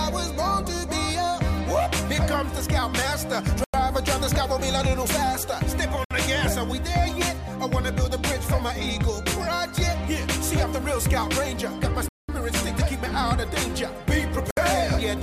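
A likely Bluetooth stall, with the headphone buffer running dry while packets were resent, cuts the audio to silence four times: at 3.64 s for 97 ms, 6.05 s for 62 ms, 12.09 s for 201 ms and 14.51 s for 64 ms, each time resuming after the gap.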